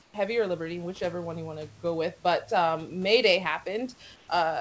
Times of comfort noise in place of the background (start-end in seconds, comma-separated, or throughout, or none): 0.02-0.14, 4.16-4.28